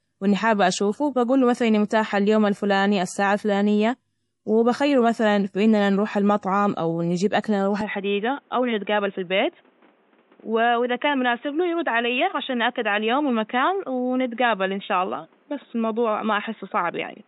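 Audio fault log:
throughout: MP3 compression. The speech carries plainly audible codec damage: weak frequency components flicker in and out between frames, giving a watery, swirling texture, with metallic chirps on sibilants and smeared attacks. On a spectrogram, the energy stops dead at 11.5 kHz with a flat ceiling, and the upper bands show patchy, blocky holes that change frame to frame. The cutoff and amount of damage point to a low bitrate, around 48 kbps, and lossy encoding is the likely cause.
7.81 to 17.27 s: input switched to a poorer device. With no silence at the change, the speech turns duller and narrower, drops about 5 dB in level, and gains a new background noise sitting about 35 dB below it. On a spectrogram, everything above 3.8 kHz vanishes from 7.81 s onward, leaving a hard horizontal edge and a thin noise floor. The waveform envelope steps down at that moment. A likely cause is the recording moving to a band-limited microphone or headset profile.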